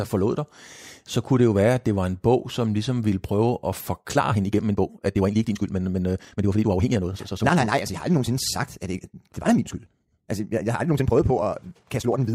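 At about 4.07 s, right after "ligesom ville prøve at", the speech lurches into a faster pace, roughly 1.64 times speed, and stays there to the end while the pitch holds steady. It sounds rushed, likely a time-stretched section squeezed by dropping short slices.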